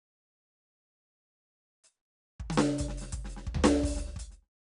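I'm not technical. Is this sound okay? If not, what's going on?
No. 4-bit ADPCM compression affects the whole clip, from start to finish. This old-style compression saves space by storing each tiny slice of the music as a rough guess of how far the sound moved from the last one, using very few steps. The guesses are coarse, so a gritty hiss rides along with every loud passage, and sudden hits come out crunchy. Everything above about 10.6 kHz is missing, which makes the music sound dull. The fade-out from roughly 4 s to 4.5 s is an ordinary, smooth edit.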